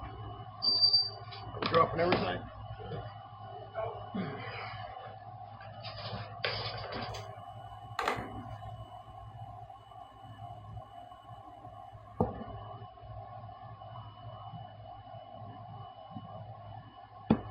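From 7.09 to 12.22 s there is imaging from linear upsampling. The rate was raised by straight-line interpolation, which fits a jump from 11 kHz to 44.1 kHz. Top end dulls. A mirrored copy, roughly 25 dB down, fills 5.5 to 11 kHz, adding faint metallic shimmer.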